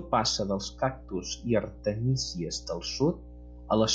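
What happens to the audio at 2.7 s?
At 2.7 s the speech sits over mains hum that runs through the whole clip: a steady 60 Hz tone from a ground loop or nearby transformer, roughly 15 dB below the speech. Its fixed pitch and unchanging level set it apart from irregular low-frequency rumble.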